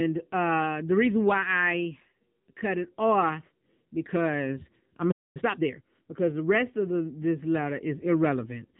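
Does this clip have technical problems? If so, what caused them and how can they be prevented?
Yes. Throughout, the speech sounds thin, buzzy and synthetic, with nothing above about 4 kHz. This is the AMR narrowband mobile codec: a vocal-tract model driven by a few pulses per subframe. The plainly audible damage points to a low-rate mode such as 7.95 kbps. Preventing this means carrying the call over a wideband codec such as AMR-WB or EVS, or using a higher AMR-NB mode when bandwidth allows.

From 5.11 to 5.37 s the sound cuts out in mid-flow for roughly a quarter of a second, then resumes. This playback stall was likely caused by the player's buffer running dry or its audio thread being blocked. A larger jitter buffer and an audio thread with higher priority that never blocks would prevent it.

From 5.37 to 5.83 s the sound runs hurried at about 1.5 times normal speed while keeping its pitch. 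This is time-compressed catch-up: the player trims small pieces and cross-fades them to recover the backlog left by the stall. Preventing the stall removes the need for it, and a gentler catch-up rate would make it less noticeable.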